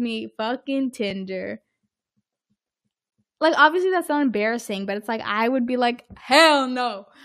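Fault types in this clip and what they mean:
Gap between stream segments: two adjacent pieces of the stream don't quite meet in time, so the player inserts silence between them without losing any audio. Hard-edged dropouts occur at 1.10 s (about 3 ms) and 3.10 s (about 17 ms, just before "like obviously that's not"). Their placement fits 1-second segment boundaries. A waveform shows a near-flat, silent stretch with abrupt edges, and a spectrogram shows a thin, clean vertical blank stripe across all frequencies.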